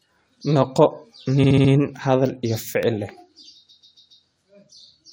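Speech with repeated frames at 1.43–1.71 s and 3.68–4.24 s: a 70 ms block, then a 139 ms block, each plays four extra times, stuttering and lengthening the sound, unlike an echo, which overlaps and fades.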